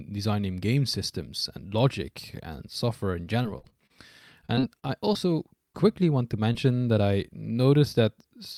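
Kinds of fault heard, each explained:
Repeated packet loss (robotic sound): successive gaps up to about 30 ms, each patched by extending the prior sound, make the speech choppy around 3.25–3.91 s and 4.46–5.17 s.
Short concealed packet loss: roughly 20 ms of audio failed to arrive and was filled by continuing the preceding sound, heard as brief smears near 5.73 s and 6.53 s.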